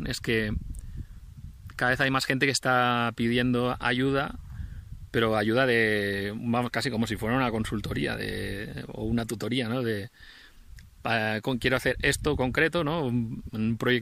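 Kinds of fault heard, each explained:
Loose connector crackle: a worn or dirty contact breaks and remakes the circuit, chopping the signal into a brief irregular scratchy burst from 2.00 to 2.07 s.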